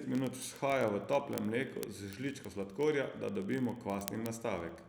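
From 0.11 s to 4.88 s the speech carries word clock ticks. The receiving clock runs roughly 0.1 percent off the sender's, so a sample slips about every 20 ms. This gives around two hundred sharp, uneven ticks, seen as evenly spaced vertical lines on a spectrogram and waveform spikes.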